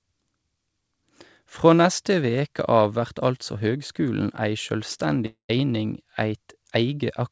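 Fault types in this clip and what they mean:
long network dropout: at 5.26 to 5.51 s the speech decays into a fading buzz, then silence, likely lost packets; unlike a brief glitch, about 240 ms never returns.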